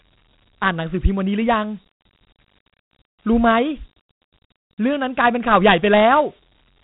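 Speech clip, coded throughout with Dialogic VOX ADPCM, a 4-bit adaptive scheme that points to about 32 kbps, so nothing above 3.9 kHz survives and gritty hiss trails the speech.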